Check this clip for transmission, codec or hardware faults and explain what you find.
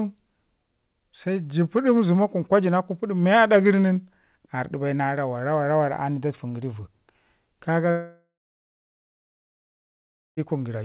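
There is one fault, a long network dropout, heard in speech carried over a narrowband call path with nothing above 4 kHz. From 7.91 to 10.4 s, packets likely stopped arriving. The receiver stretches the last sound into a brief fading buzz, then leaves about 2.1 s of silence, and roughly 2.5 s of speech is lost.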